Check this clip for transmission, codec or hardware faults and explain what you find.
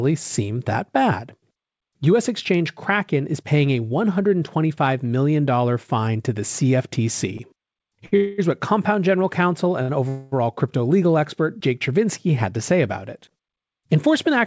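Two kinds of network timing fault appear in this speech, both near the end, plus a buffer speed-up in the last half-second. The audio has no content above 8 kHz, which fits a G.722 wideband call path.

Short stalls from a late packet occur at 8.06–8.14 s and 9.82–9.91 s. Each time a packet missed its slot, the jitter buffer emptied, and the receiver stretched the previous sound by 62 ms before resuming at the same point. This produces a briefly held, slightly buzzy sound.

Call audio freezes follow at 8.16–8.40 s (220 ms) and 10.09–10.34 s (231 ms). These likely come from packets held up in transit, leaving the buffer empty for longer. The last sound is continued as a fading buzz without reaching silence, and the audio then resumes with nothing lost, only delayed.

A jitter buffer speed-up runs from 13.97 to 14.37 s. To shed excess buffered audio, the receiver cut about 40 ms of pitch-period-sized pieces. 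Playback runs at 107% speed at unchanged pitch, so the speech sounds slightly hurried.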